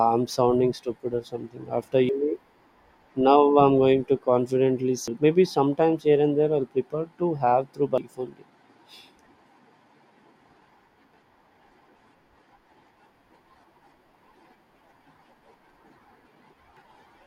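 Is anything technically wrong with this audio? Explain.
Yes. The speech contains damaged data in a compressed stream, heard as brief chirps or squawks at 2.09, 5.08, 7.98, 11.14 and 16.77 s. At each point the decoder hits corrupted bytes, misreads the frame and searches for the next valid header before sync returns. This differs from a plain dropout or click: those are silences or sharp ticks, whereas here the decoder loses sync and usually jumps ahead by one frame or more.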